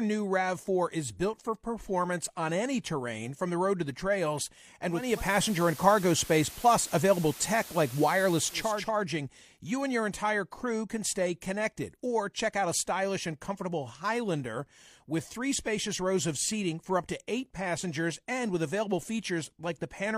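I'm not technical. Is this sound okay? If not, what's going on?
No. From about 4.87 to 8.91 seconds there is digital radio blending to analogue. The radio lost its digital signal and faded, over about 0.4 seconds, to the station's FM broadcast. Hiss comes up and the volume shifts. Then it returns to digital.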